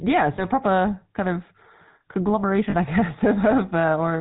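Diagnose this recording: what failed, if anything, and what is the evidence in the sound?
The codec stage failed: the GSM full-rate codec has plainly audible damage across the whole speech recording. The sound has a buzzy, gravelly roughness and nothing above 4 kHz, which fits the 13 kbps GSM full-rate coder. It models the vocal tract as a filter and excites it with a regular pulse train built from only every third excitation sample. That coarse excitation causes the grit, and the 8 kHz sampling sets the 4 kHz ceiling.

Lost GSM frames at the network stage caused two brief breaks, the first from 0.36 to 0.43 s and the second from 2.70 to 2.76 s. At each break the sound holds on a rough, metallic ring instead of moving on. The decoder concealed each bad frame by repeating the last good frame's parameters. The first break fits a single lost 20 ms frame and the second fits two, covering 40 ms. 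Both were too short to fade fully to silence.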